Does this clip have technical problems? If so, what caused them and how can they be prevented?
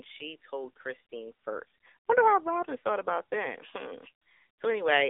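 Yes. AMR narrowband mobile codec damage runs throughout: the speech is confined to roughly 300 Hz to 3.6 kHz with nothing above 3.7 kHz, and its buzzy, synthetic texture points to a low AMR-NB mode near 8 kbps that rebuilds the voice from a coarse vocal-tract model and sparse pulses. Recording directly or over a wideband link such as AMR-WB or EVS, rather than a narrowband phone call, prevents it.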